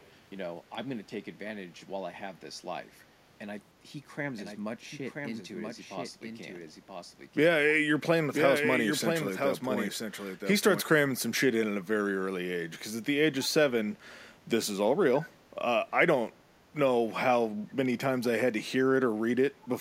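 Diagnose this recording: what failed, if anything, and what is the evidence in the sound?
Echo leak, call processing stage. There are brief scraps of a delayed copy of the speech at 0.0 to 0.11 s and 3.0 to 3.04 s, sitting about 35 dB under the talker, plus a louder burst at 19.61 to 19.76 s, roughly 25 dB down. Each trails the original by 312 ms. The far end is likely on a loudspeaker, and its echo canceller let some of the mic pickup slip back down the line.

Doubled audio track, at the capture or edit stage. From 4.38 to 10.8 s a second full-band copy of the speech runs about a second behind, only around 5 dB quieter. It has no decay and no room colouring, and it switches in and out abruptly at those edges. That fits a second, slower capture path or an edit that left two out-of-step copies in the mix.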